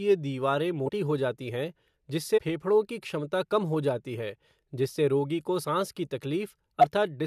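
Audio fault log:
0.85–0.89 s, 2.37–2.39 s, 5.63 s, 6.78–6.85 s: compressed frames skipped. Whole frames of speech went missing, so it jumps ahead.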